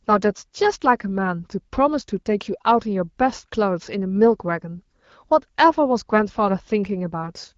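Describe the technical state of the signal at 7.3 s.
At 7.3 s the signal is intact, with no fault present at that moment.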